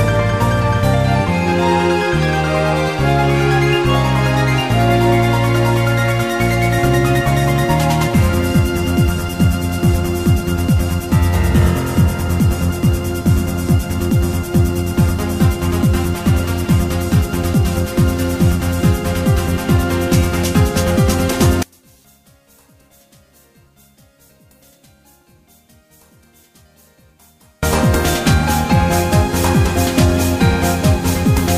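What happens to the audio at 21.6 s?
At 21.63 s the sound collapses and stays nearly gone until 27.63 s. The level falls by about 36 dB, leaving only a faint residue. The likely cause is one channel inverted. One stereo channel has flipped polarity. When the two channels are summed to mono, everything they share cancels. Only the small difference between them survives. That difference is what remains audible for those six seconds.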